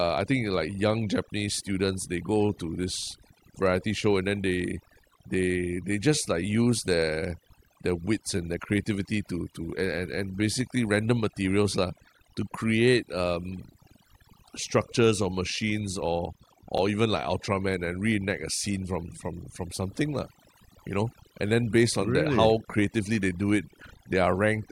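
From the top, the whole speech track has overdone noise removal on it. The denoiser was pushed too hard, so any frequency band sitting close to its noise estimate gets pulled way down or switched off, and the softer parts of the voice get caught too. You hear the background go nearly dead apart from little twinkly specks.

Then at about 16.78 s, right after "structures or machines or" and just before "even like", there's a block of digital silence, only 5 ms long. A short run of samples got replaced with zeros, which points to the output buffer not being filled in time or a calculation throwing out invalid values. The signal drops straight to nothing and back with no fade, so it lands as a quick tick rather than a noticeable gap.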